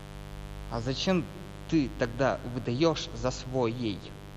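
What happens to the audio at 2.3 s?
Mains buzz is running under the speech at 2.3 s, as it does for the whole clip. Sharp switching spikes from the 50 Hz supply, such as from a dimmer, a rectifier or a missing shield, leak into the signal twice per mains cycle, spreading harmonics of 50 Hz up to several kilohertz. The result is a steady, raspy buzz sitting about 15 dB below the speech.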